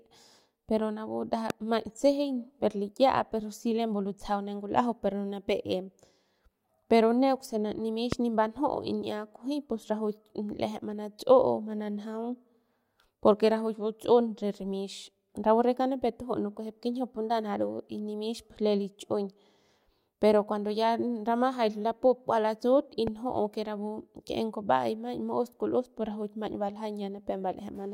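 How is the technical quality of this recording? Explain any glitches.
The recording has three loud pops in otherwise continuous speech, at 1.50–1.52 s, 8.12–8.15 s and 23.07–23.10 s. Each single sharp thump, well above the speech level, is likely a voltage spike from a switch, plug or static, with no gap or dropout beneath it.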